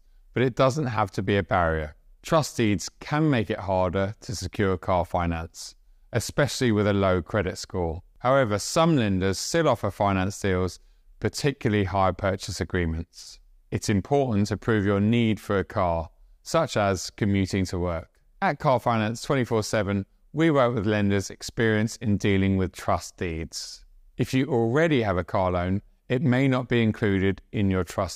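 Nothing here goes wrong at any point, so there's no fault to place on the timeline.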